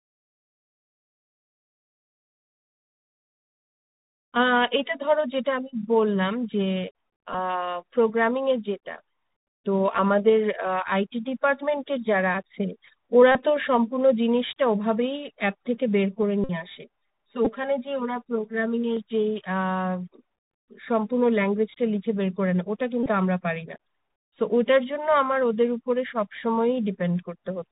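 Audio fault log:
throughout: Bluetooth CVSD headset codec. The speech is dull and boxed-in, with a grainy hiss beneath it, scratchy s sounds and grit on loud bright moments. It sounds like a 64 kbps CVSD link: nothing above 4 kHz survives, and the one-bit adaptive step can't keep up with fast, loud high content.
7.33, 13.32–13.42, 16.44–16.51, 17.45–17.47, 23.03–23.08: Bluetooth headset packet repeated. From the shortest, 11.2 ms at 7.33, to the longest, 52.5 ms at 16.44, each turns into a brief buzz near 267 Hz. Lost voice packets were filled by decoding the previous packet again, once every 3.75 ms.
16.23–18.97: channel delay (comb filtering). The sound turns hollow and phasey. One channel runs around 5 ms behind the other, and summing them to mono cuts evenly spaced notches in the spectrum, starting near 100 Hz.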